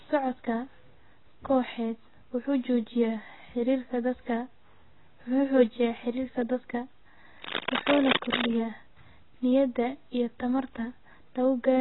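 Speech runs throughout with a dull, smeared tone and a warbling, fizzy edge on sibilants. Nothing remains above about 3.9 kHz, which fits heavy AAC compression at around 16 kbps. On a spectrogram this appears as a hard ceiling with patchy holes beneath it. From 7.37 to 8.57 s, cable scratch noise, likely from a worn connector being moved, adds dense rustling bursts roughly as loud as the speech. In the waveform these show up as ragged spiky clusters, and on the spectrogram as broadband vertical smears.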